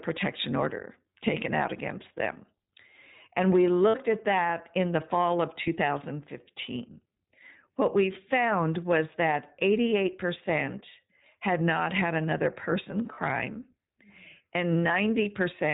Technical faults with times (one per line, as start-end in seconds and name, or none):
0.00-15.74 iLBC codec
2.34-2.38 lost iLBC frames
3.88-3.95 lost iLBC frames
5.63-5.68 lost iLBC frames
13.14-13.19 lost iLBC frames